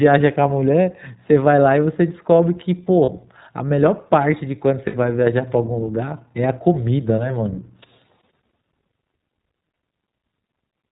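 The whole recording passes through the iLBC codec in narrowband, likely its 15.2 kbps mode with 20 ms frames, so nothing above 4 kHz survives. The speech stays intelligible but sounds plainly rough, muffled and slightly synthetic throughout.

Lost iLBC frames break the stream twice, a 40 ms gap at 3.04 to 3.11 s and a 60 ms gap at 4.88 to 4.96 s. The decoder repeats the last pitch cycle blended with noise, leaving a brief buzzy, held vowel before the speech recovers almost instantly.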